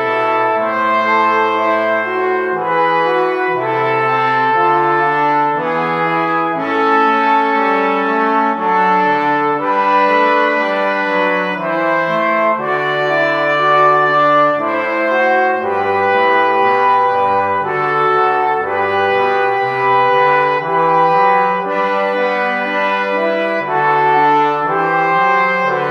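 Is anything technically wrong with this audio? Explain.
No, nothing is technically wrong with this audio.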